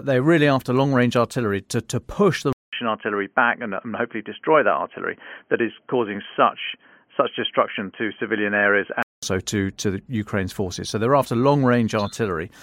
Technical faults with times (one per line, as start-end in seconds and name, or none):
2.53-9.23 input switched to a poorer device